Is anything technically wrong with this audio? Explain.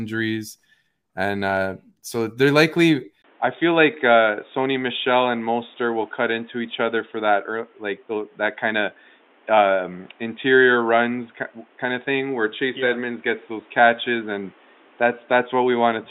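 Yes. From 3.22 s to the end, the input likely switched to a poorer device. There is a 20 ms silence at the switch. After it, nothing above 3.8 kHz remains, so the speech turns dull. A new noise floor appears, roughly 35 dB below the signal. The level stays about the same.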